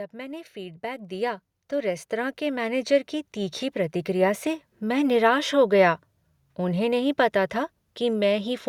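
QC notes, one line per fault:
0.11–4.4 s, automatic gain rising: the automatic gain control treats the input as too quiet and lifts its gain steadily by about 14 dB across roughly four seconds, so the speech and the background noise floor swell together rather than the speech alone getting louder, settling just before "से मैं निराश हो". On the waveform the envelope widens like a ramp. On a spectrogram every band brightens together, noise gaps included.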